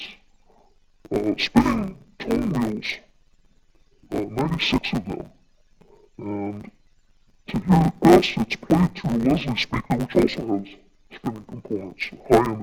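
Throughout the clip, interleaved audio is read as planar: each 10 ms block of alternating left and right samples is split into halves treated as separate channels, each played at half speed. With blocks this short, the sound turns dull and robotic, buzzing at 100 Hz, without a clear octave drop.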